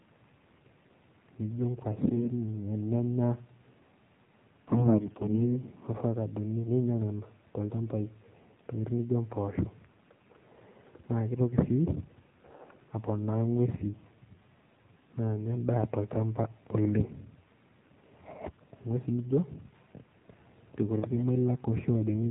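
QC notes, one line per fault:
throughout, AMR narrowband mobile codec: nothing above 4 kHz survives, and the speech has a buzzy, synthetic edge because a vocal-tract model driven by sparse pulses rebuilds each 20 ms frame. That steady, even coarseness fits a low mode near 7.4 kbps, unlike damage that comes and goes.
1.99–2.31 s and 4.68–5.57 s, AMR bit errors: the speech keeps its pitch and loudness but briefly turns hoarse, scratchy and gargly. Flipped low-priority bits misplace the excitation pulses and skew the finer gain and spectral values. The longer second burst, with heavier corruption around a tenth of bits, sounds rougher than a dropout or mute.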